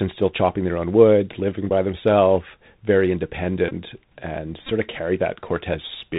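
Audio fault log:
throughout, Bluetooth CVSD headset codec: The speech sounds narrow and boxy, with nothing above 4 kHz, a grainy hiss underneath and scratchy s sounds. The 64 kHz one-bit delta coder's adaptive step can't keep up with fast, loud high content, so it distorts.
1.70 s, 3.69 to 3.72 s, 4.67 to 4.72 s, Bluetooth headset packet repeated: Short buzzy ticks appear where the link dropped about 11, 22 and 34 ms of audio. The chip replayed the last good packet, so the repeats every 3.75 ms give a roughly 267 Hz buzz. The last dropout is scattered over 45 ms, with its longest run about 20 ms.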